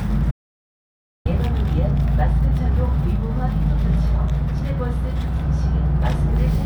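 An audio dropout to silence runs from 0.31 to 1.25 s in this recording of sounds: about 0.94 s cuts to silence with no room tone, then the sound resumes mid-flow. The input was likely lost while the recorder kept writing silence.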